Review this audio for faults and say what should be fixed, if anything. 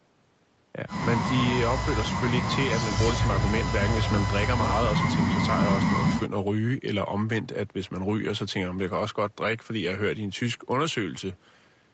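Nothing in this speech recording stood out on listening, so there is nothing that needs fixing.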